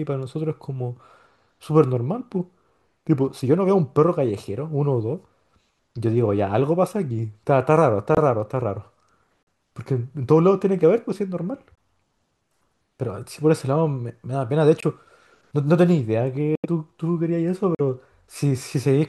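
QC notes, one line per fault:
8.14–8.18 s, 9.43–9.48 s, 11.72–11.78 s, 14.80–14.84 s, 16.55–16.66 s, 17.75–17.80 s: corrupt frame muted. The decoder rejected damaged compressed frames and the player substituted silence, cutting abrupt 36–106 ms holes into the speech. Those lengths suggest two to five frames each, with timing preserved.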